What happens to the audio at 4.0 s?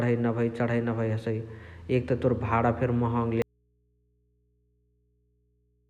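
At 4.0 s the speech is gone and only a faint mains hum remains, roughly 45 dB below the signal. This is an audio dropout to a faint residue, running from 3.42 s to the end, likely from the source cutting out while the input stayed open.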